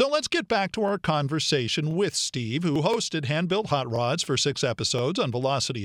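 Overlapping chunks: each 1.0 s chunk of this speech begins about 25 ms before the previous one finished, so that sliver plays twice at every join. The result is a regular stutter or click at 0.89–0.91, 1.91–1.94, 2.94–2.96, 3.96–3.99 and 4.99–5.01 s.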